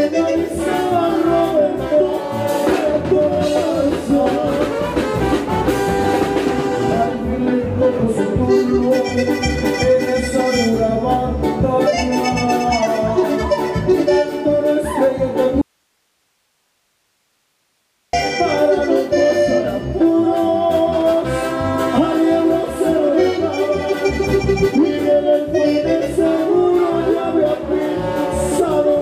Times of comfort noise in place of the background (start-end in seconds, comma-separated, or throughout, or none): none